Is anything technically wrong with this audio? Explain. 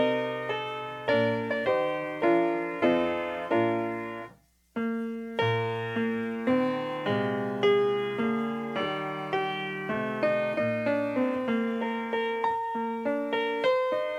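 No, nothing in the signal points to a technical fault.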